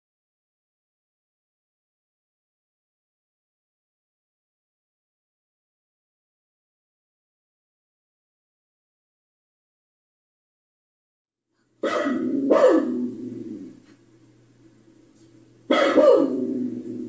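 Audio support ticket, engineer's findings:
Nothing wrong turned up on this one, no faults to log and nothing that needs chasing.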